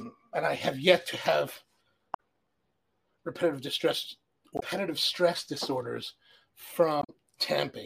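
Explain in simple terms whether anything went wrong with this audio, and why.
Damaged data in a compressed stream causes brief glitches at 2.10 to 2.19 s, 4.56 to 4.63 s and 6.99 to 7.10 s. Bits of the compressed file were corrupted there, so the decoder misread those stretches and lost its place, giving a short chirp, squawk, click or hole until it recovered.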